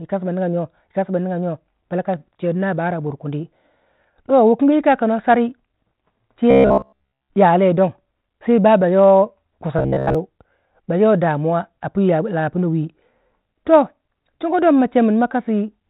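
Speech heard through a G.726 path at 32 kbit/s, whose band stops at 4 kHz with only light coding damage, carries robotic sound from repeated short buffers at 6.51–7.32 s and 9.79–10.15 s. There a rigid 66.8 Hz buzz replaces most of the sound, likely from a roughly 15 ms buffer being replayed. On a spectrogram it shows as evenly spaced horizontal harmonic lines, and on the waveform as identical repeating cycles.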